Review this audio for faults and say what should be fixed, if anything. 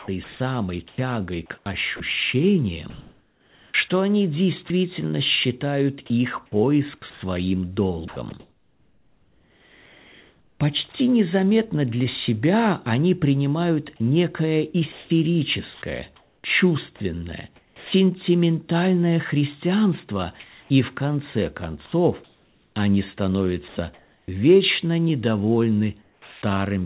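Sound chopped by the voice detector occurs in four stretches: 0.0 to 4.7 s (ending just before "считают их"), 6.46 to 10.94 s (between "считают их" and "незаметно для себя они"), 14.92 to 17.92 s (after "себя они принимают некое"), and 20.4 to 24.28 s. Within each, quiet syllables and word edges give way to comfort noise, about 1.3, 2.5, 0.9 and 1.3 s in total, so the speech sounds choppy. The likely cause is the sender's detector toggling transmission on low-level speech. Lowering the detector's threshold and lengthening its hangover time, or disabling discontinuous transmission, would prevent it.

Sound dropped by the voice detector appears at 26.02 to 26.42 s. The sound gives way to 0.4 s of steady comfort noise, losing about 0.21 s of speech before transmission resumes. The likely cause is the detector classifying quiet speech as background and stopping transmission. The band above 4 kHz is absent throughout, consistent with a narrowband G.711 call path. 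The same fix applies: a longer hangover or a less aggressive detector setting would prevent it.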